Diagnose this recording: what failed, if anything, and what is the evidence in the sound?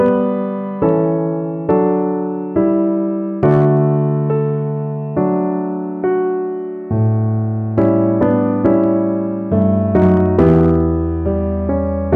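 Hard clipping is present in several places: the signal exceeded what a converter or fixed-point format could carry, so peaks were cut flat. Brief crackles sit at 0.06–0.08 s, 0.89 s, 1.70 s and 12.14 s, overdriven by about 1–2 dB. Longer stretches at 3.43–3.79 s and 7.78–8.84 s (about 3 dB) sound gritty, and 9.62–10.80 s, about 6 dB over, turns into sustained harsh fuzz as the flattened tops add high harmonics.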